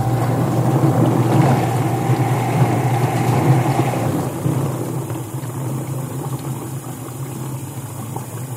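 No technical faults can be heard anywhere in the audio; the signal stays intact and continuous throughout.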